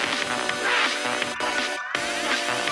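Everything in the clip runs too fast and too high. That is the wrong sample rate fault, and it lasts from start to finish. Playback is 1.5 times the intended speed. Pitch rises by about 7 semitones, roughly a fifth. Speed and pitch move together by the same ratio, so no conversion was applied between rates. A 3 to 2 ratio fits audio captured at 16 kHz and played back at 24 kHz.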